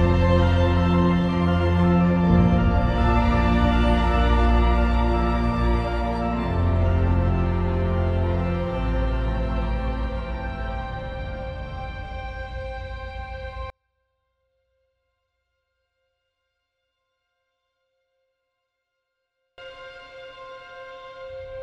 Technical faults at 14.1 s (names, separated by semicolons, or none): one channel inverted